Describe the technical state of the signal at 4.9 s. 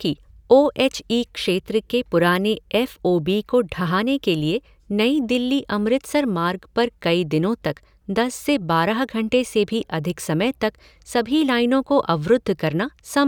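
The signal at 4.9 s is intact, with no technical fault audible at that moment.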